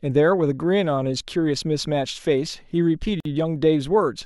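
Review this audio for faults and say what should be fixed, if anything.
Gap at a join of encoded pieces, 3.20 to 3.25 s: a 50 ms silence cuts into the continuous speech with smeared edges before the speech resumes where it stopped. Separately encoded pieces were joined with each encoder's start delay and end-frame padding left in. To prevent it, trim the encoder delay and padding from every piece before joining, or encode the whole recording in a single pass.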